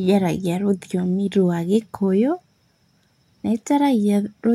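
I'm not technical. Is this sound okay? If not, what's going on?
Yes, this speech recording has no audible technical problems.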